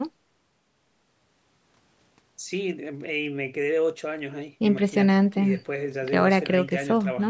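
The speech recording has no technical faults. It has passed through a call's microphone processing, so the lowest bass is trimmed away and nothing sits above 8 kHz, which is how that path normally behaves.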